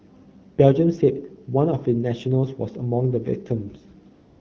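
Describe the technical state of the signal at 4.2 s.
At 4.2 s the signal is AMR comfort noise, running from 4.13 s to 4.40 s: speech frames stopped and the receiver synthesised a steady, smooth hiss from a coarse level and spectrum estimate. A spectrogram shows a flat, featureless band starting abruptly; the waveform shows even noise.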